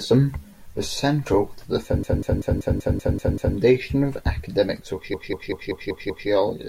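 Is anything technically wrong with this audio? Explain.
Yes. The speech has repeated frames. After "was central to the", from 2.03 to 3.57 s, a 192 ms block replays eight extra times. A second run, from 5.14 to 6.29 s, adds six more. The decoder plays the same compressed data again, so the sound stutters in loops, and the clip runs longer.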